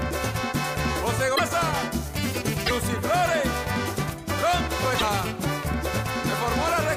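Three brief garbled glitches break the audio, at 1.35 to 1.40 s, 2.65 to 2.71 s and 4.98 to 5.03 s. Each lasts roughly 50 to 56 ms, about two MP3 frames of 26.1 ms, and the sound skips forward across it. The likely cause is a broken MP3 bit reservoir: after frames were dropped, the following frames reached back for borrowed data, found bytes from the wrong frame and decoded them as corrupt audio.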